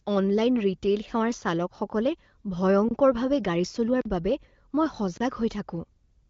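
Short, hard holes break the speech at 2.89 to 2.91 s (24 ms), 4.01 to 4.05 s (40 ms) and 5.17 to 5.20 s (30 ms). Each is a block of digital silence, where samples were replaced by zeros, likely because the output buffer wasn't filled in time. The AMR-WB path carries clear speech up to about 7 kHz.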